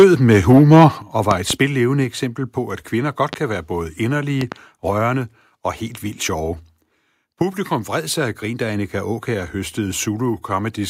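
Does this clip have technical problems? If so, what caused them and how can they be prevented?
Yes. Microphone overload runs from 0.0 to 0.86 s. The speech peaks exceed the converter's limit by about 6 dB, and a noticeable share of samples is flattened, giving the loudest syllables a harsh, crackling edge. The likely cause is an input gain set too high. Set the microphone's input level so peaks stay several decibels below full scale.

A microphone volume step-down occurs at 1.02 s. Voice and background drop together by about 9 dB in one abrupt step, right after the distorted opening. This is likely the call software's automatic gain control reacting to the clipping. Start with a sensible input level, or disable automatic gain adjustment, so no sudden correction is needed.

Loud pops occur at three points, each sitting around 15 dB above the speech, which carries on underneath. The first is a pair between 1.31 and 1.54 s, just before "eksempel på at kvinder". 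The second is a single pop from 3.33 to 3.36 s, just after "på at kvinder godt". The third is another pair from 4.41 to 4.55 s, just before "rørende og helt vildt". These are likely voltage transients from a loose connector, static discharge or a driver glitch, shaped by the circuitry after them. Secure cables, avoid touching connectors while recording, and keep audio drivers up to date.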